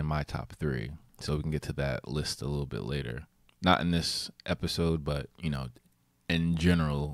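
Speech recording with no audible technical faults.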